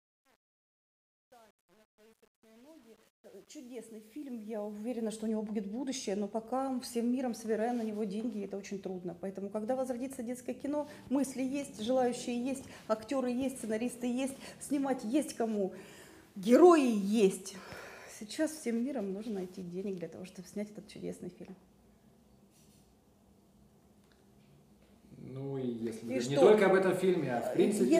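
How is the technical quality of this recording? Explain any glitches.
The opening fade-in is damaged by truncation distortion on a fade. It runs from 0.0 to 5.29 s and is worst up to 4.78 s. The fade stage keeps only about 9 bits and adds no dither. At low levels the waveform becomes coarse steps. The quiet start sounds gritty, before the audio clears as the fade reaches full level.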